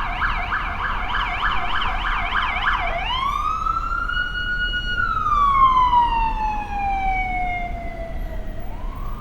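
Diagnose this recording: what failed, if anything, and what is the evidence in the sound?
Nothing in the signal chain appears to have failed: the audio shows no dropouts, clicks, distortion or timing irregularities at any stage from capture to playback.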